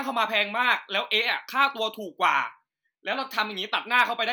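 From 0.14 s to 4.23 s the speech carries clock slip clicks, a train of roughly twenty faint ticks spaced about every fifth of a second. The likely cause is two unsynchronised clocks drifting apart by around 100 ppm, so a single sample is dropped or repeated each time the error accumulates to a whole sample. The strictly even spacing is what separates this from random digital clicks or packet dropouts, which land irregularly and leave audible gaps.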